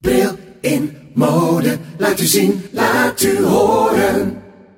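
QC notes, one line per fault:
No faults detected at any point in this clip.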